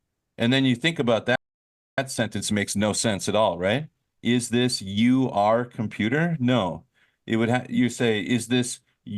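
At 1.36 s, just after "then you think about", the speech cuts out mid-flow. Silence holds until 1.98 s, a gap of about 0.62 s. Then the audio picks up again. This is a playback stall. The likely cause is that the player ran dry of data, or its output thread was held up. Either way, nothing reached the output for that stretch.

From 1.98 s to 4.98 s comes time-compressed catch-up. The speech runs about 1.1 times faster than normal. Pitch stays where it was. The player is working off its backlog. It trims small pieces from the audio and cross-fades across each join. That trimming gives a hurried delivery. Normal pace returns at 4.98 s, just before "are computer".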